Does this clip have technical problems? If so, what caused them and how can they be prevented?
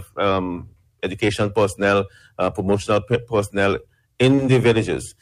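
No, nothing stood out as a technical problem on listening to this clip.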